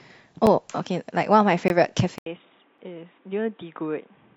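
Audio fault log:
0.46 s, 1.68 to 1.70 s and 2.78 s, block of digital silence: likely the output buffer went unfilled in time, so the sound dropped to silence with no fade. The 5 ms gaps at 0.46 and 2.78 s are heard as ticks; the 20 ms gap at 1.68 s is a short hole.
2.18 s to the end, input switched to a poorer device: the likely cause is a mid-recording change to a lower-grade microphone or headset profile. After a silence of about 80 ms the speech turns dull and boxy, with nothing above 3.8 kHz, drops roughly 10 dB in level, and carries a new noise floor about 35 dB below it.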